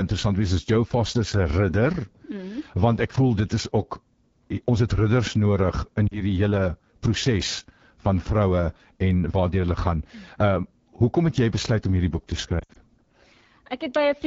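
It's a speech clip run through the AMR wideband (HD Voice) codec, and the rough, raspy edge throughout points to one of its lowest modes, likely 8.85 kbit/s. There are lost AMR speech frames too: two frames, 40 ms in all, at 6.07 to 6.21 s, then right after "boek te" a choppier patch from 12.60 to 12.77 s, where the decoder fills in and fades, with the longest gap about 60 ms.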